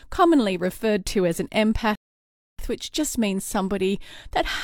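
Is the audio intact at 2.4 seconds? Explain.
No. At 2.4 s the speech is inside a rebuffering stall running from 1.95 to 2.59 s: playback ran dry and paused, adding 632 ms of silence before resuming exactly where it stopped. A waveform shows a flat line, and a spectrogram shows an empty vertical gap.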